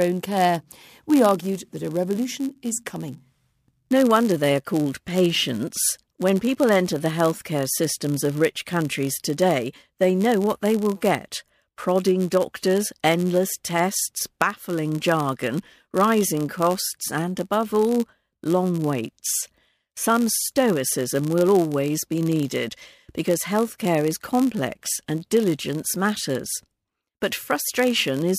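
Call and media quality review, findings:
Block size mismatch (padded), throughout the speech. Steady buzz at 91.5 Hz, the block rate, from a short zero-filled gap closing every block. Upstream stage writes blocks slightly shorter than the downstream stage reads. Playback runs slow at 0.996x, about 0.4% stretch. Suspect the framing handoff between the two stages.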